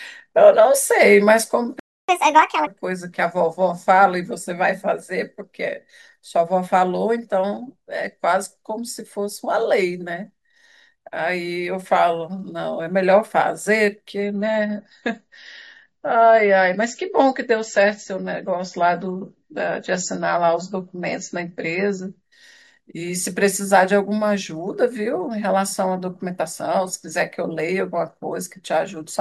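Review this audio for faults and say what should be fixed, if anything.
A playback stall, likely from the player running out of buffered data, cuts the speech to silence from 1.79 to 2.09 s, a gap of about 0.29 s.

Catch-up at higher speed follows as the player drains its backlog by resampling at 1.5x from 2.09 to 2.67 s, so the speech rushes and rises by roughly seven semitones.

An adaptive stream at a lower bitrate takes over from 14.23 to 22.23 s as the connection slows. Treble vanishes above 7.7 kHz and codec artefacts thicken, consistent with MP3 dropping from about 128 to about 33 kbit/s.

Deeper client buffering, time-stretching without pitch change for catch-up, and a more conservative bitrate-switching policy would fix these.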